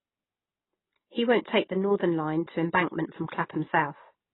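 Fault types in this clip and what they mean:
AAC compression: a heavy AAC-LC encode, likely at a bitrate around 16 kbps, removes everything above 3.9 kHz, leaving the speech dull, smeared and warbly throughout.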